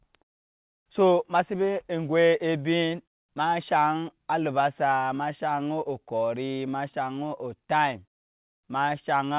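Nothing goes wrong here: the speech comes over a phone-grade call link that carries nothing above 4 kHz, and the background quietly drops away in the pauses, both just the way that path normally behaves.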